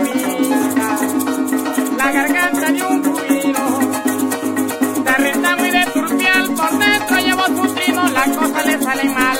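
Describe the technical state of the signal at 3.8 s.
At 3.8 s the signal is intact, with no audible fault at that point.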